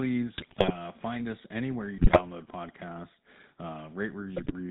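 A buzzy, gravelly roughness runs through the whole of the speech, and nothing above 4 kHz comes through. That is the GSM full-rate codec, which fits 13 kbps coding: it models the vocal tract and drives it with sparse, regularly spaced excitation pulses, discarding fine detail.

From 0.36 to 0.76 s, just before "find us anywhere you", then from 1.98 to 2.22 s right after those words, and again from 4.36 to 4.53 s, the sound breaks into squawks, pops and gargling. These are GSM bit errors, which fit an error rate of a few percent. Corrupted filter, pitch and gain values warp the spectrum and spike the level across a run of frames.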